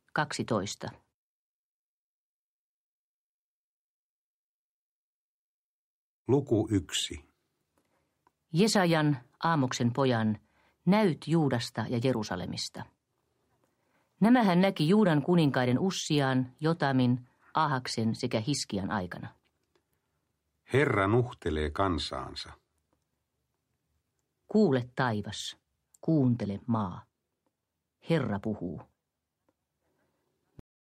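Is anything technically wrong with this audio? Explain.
Yes, the audio has a cut-off end. At 30.6 s the sound stops abruptly in the middle of an event, with no fade or natural decay, and the last 0.31 s are flat digital silence. The final stretch of buffers was never written out or played back, so the waveform is truncated instead of ending on its own. That leaves the ear with an unresolved, chopped-off sound rather than a finished one.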